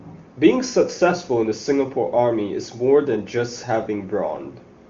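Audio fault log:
No faults: the speech runs through an AMR wideband (HD Voice) path whose faint-to-absent coding damage fits the top 23.85 kbit/s mode, with nothing above about 7.3 kHz.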